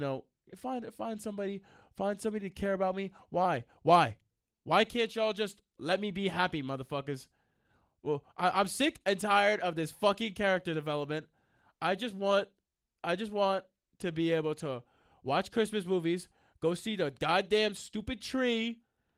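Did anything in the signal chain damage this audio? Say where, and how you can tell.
No, nothing in the chain has damaged this speech, and the Opus voice coding, which points to roughly 24 kbps in hybrid mode at full bandwidth, leaves only light, ordinary coding traces rather than any fault.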